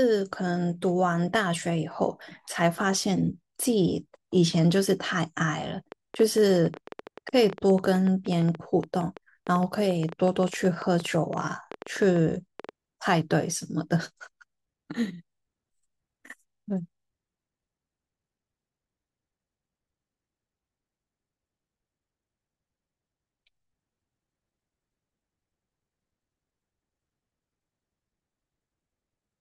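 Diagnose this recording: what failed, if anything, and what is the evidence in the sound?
A train of clicks runs over the speech from 5.92 to 12.70 s, about 8.7 per second at uneven spacing, peaking slightly above the speech, likely from electrical interference in the analogue wiring.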